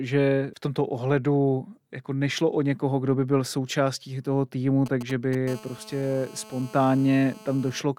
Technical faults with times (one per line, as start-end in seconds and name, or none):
4.86-5.35 GSM signalling bursts
5.47-7.82 GSM phone buzz